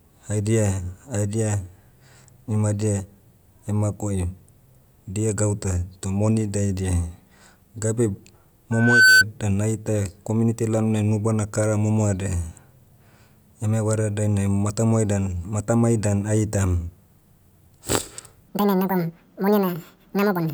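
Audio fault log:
8.72 to 9.24 s, loudspeaker feedback squeal. A single tone at 1.5 kHz appears and swells over roughly a third of a second. It then sits about 10 dB above the speech. The microphone is hearing the loudspeaker it drives, and at 1.5 kHz the loop gain tops one. That frequency reinforces itself on every pass, so it rises into a squeal. It stops at 9.24 s.
18.49 to 20.53 s, section at the wrong speed. The last two seconds of speech run at 1.82 times normal speed. Pitch and pace change together. The voice jumps up by around ten semitones and sounds high and hurried. Because speed and pitch shift as one, this is a playback rate mismatch, not a pitch effect. The likely cause is this stretch being played or joined against the wrong clock.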